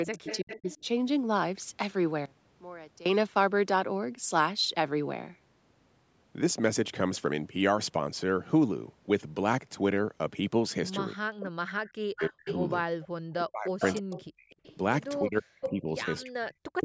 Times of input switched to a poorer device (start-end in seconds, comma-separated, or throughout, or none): none